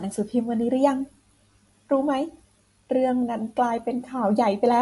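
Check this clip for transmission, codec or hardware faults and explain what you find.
One fault runs the whole length of the speech. The treble stops dead at 11.3 kHz, and the sound is audibly watery and swirly, with chirpy s sounds and softened consonant attacks. The likely cause is MP3 compression at a low bitrate, which fits roughly 48 kbps. Starved of bits, the encoder discards everything above a fixed cut-off and drops weak frequency lines that flicker between frames. On a spectrogram this appears as a flat ceiling at 11.3 kHz with patchy, blinking holes beneath it, and the waveform's transient edges look blurred.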